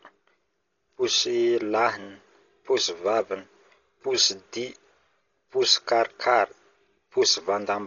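A speech clip with heavy codec damage from start to finish, most likely Dolby Digital compression at a very low bitrate, with a sound consistent with roughly 32 kbps. Nothing survives above 7 kHz, so the speech is dull and muffled, and a rough, fluttering noise clings to voiced sounds where starved frequency lines have been filled with dither noise. On a spectrogram, energy stops abruptly at 7 kHz, with grainy, speckled texture around the harmonics below it.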